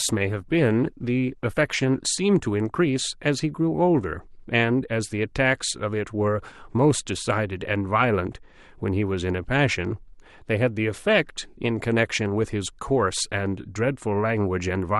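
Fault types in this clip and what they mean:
Adaptive stream starting at a low bitrate: for the first 2.0 s the speech sounds dull and smeared, with the treble missing or replaced by a hissy, synthetic fill and the codec artefacts stronger. At 2.0 s the quality jumps up abruptly with no gap or dropout. The player began on a cheap rendition of the stream to start quickly, and switched up once it had measured the connection. The sound fits a step from roughly 16 kbit/s Opus to 64 kbit/s.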